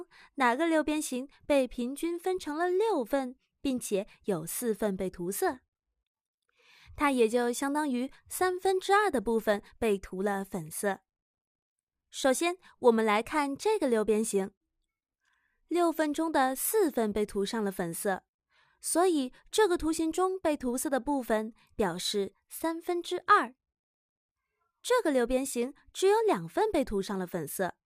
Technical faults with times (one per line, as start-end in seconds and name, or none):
none